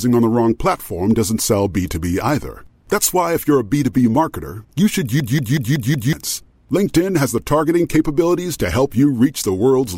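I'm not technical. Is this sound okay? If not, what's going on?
No. A system hang loop hits from 5.20 to 6.13 s, right after "marketer you should". The computer briefly froze, but the sound hardware kept replaying the last short chunk it held, about 0.19 s of audio, over and over. You hear that same snippet repeat five times, about 5.4 times per second, as a machine-gun stutter. When playback recovers, roughly a second of the recording is simply gone.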